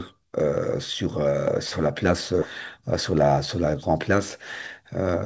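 At 2.42 to 2.44 s the audio makes a skip ahead: roughly a second of speech never arrives, and playback jumps straight from one point to a much later one with no gap or fill. The delay drops by about the same amount, as when a backlogged buffer discards what it holds. On the waveform the envelope changes abruptly at the joint; on the spectrogram harmonics and formants break off and restart at unrelated positions, with no silent column between them.

From 2.81 to 3.75 s comes a jitter buffer speed-up. The receiver is holding more audio than it wants and trims it by cutting out short pitch-period pieces over and over, roughly a tenth of a second in total. The speech runs at about 108% speed with unchanged pitch and sounds slightly rushed. On a spectrogram the harmonic spacing stays the same while syllables and formant transitions are compressed in time. The waveform shows periodic cycles with occasional missing periods but no clicks. 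Above 8 kHz the spectrogram is empty throughout, as expected from the G.722 call path.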